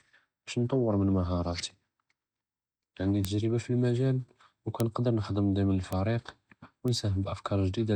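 A speech recording with four bit error spikes. Each is a single sharp tick, at 3.25 s, 4.80 s, 5.93 s and 6.88 s. Every one lasts just one sample. One flipped bit makes the sample value jump by a power of two and snap back. The peaks reach about -7 dBFS twice, then about -13 and -19 dBFS. The energy spreads across the whole spectrum. None of the ticks follows the speech.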